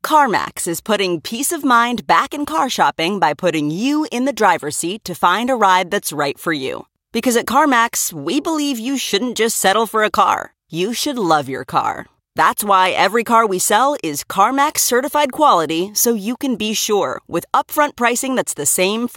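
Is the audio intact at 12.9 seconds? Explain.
No. Dropped samples at 12.86 s cause a single sharp click. A fraction of a millisecond of the stream is likely missing, so the waveform jumps abruptly to a later value. No sound is lost, but the break appears as a thin vertical line across the spectrum.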